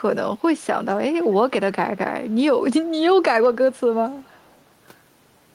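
Faint delayed copies of the speech appear at 1.23–1.34 s, 2.85–2.90 s and 4.21–4.61 s. Each trails the original by 327 ms and sits roughly 30 to 40 dB below it. This is echo leak, likely loudspeaker pickup that the far end's echo canceller failed to remove.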